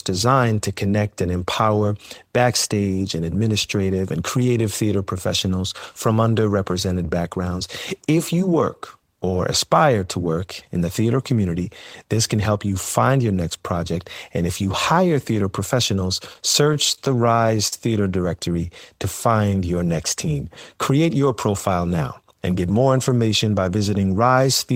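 From 16.33 to 17.73 s the speech shows repeated stalls (stutter): packets arrived late, the jitter buffer kept emptying, and twelve brief waits, the longest 44 ms, were filled by stretching the last sound. On a spectrogram, short smeared, frozen bands interrupt the harmonics.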